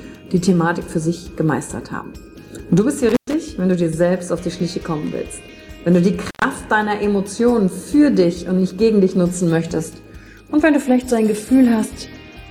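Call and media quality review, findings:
Intermittent contact, two dropouts at 3.09–3.34 s and 6.28–6.44 s, each opening for about 110 ms. Crackle at the edges, faint hiss during the gap. Probably a loose cable or plug briefly breaking the signal path; worth reseating or swapping the lead.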